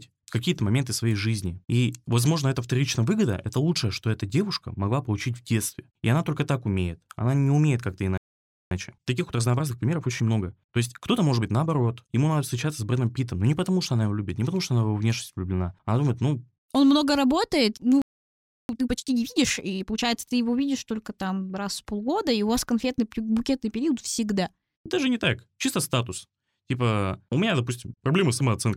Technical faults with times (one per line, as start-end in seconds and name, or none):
8.17-8.71 playback stall
8.71-11.71 time-compressed catch-up
18.02-18.69 playback stall
18.69-20.03 time-compressed catch-up